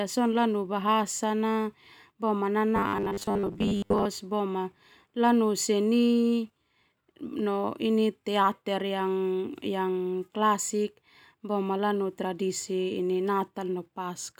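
From 2.76 to 4.08 s the speech becomes a rigid, metallic 100 Hz buzz, robotic sound from repeated short buffers, likely 10 ms loops filling about half.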